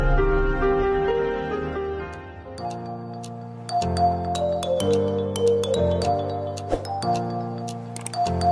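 No technical faults can be heard in the audio.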